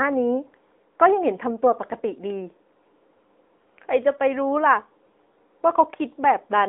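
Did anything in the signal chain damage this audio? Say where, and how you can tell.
Yes, at the codec stage: an AMR narrowband mobile codec runs throughout. Nothing passes above 3.8 kHz, the band sits near 250 Hz to 3.6 kHz, and the speech has a plainly buzzy, synthetic texture. A plain band-pass filter would narrow the band without that artificial buzz, which fits a mid-rate mode around 10 kbps.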